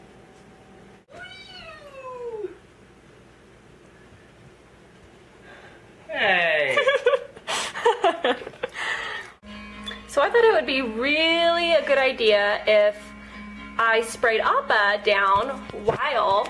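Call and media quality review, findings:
Nothing stood out on listening; no findings to log against this recording.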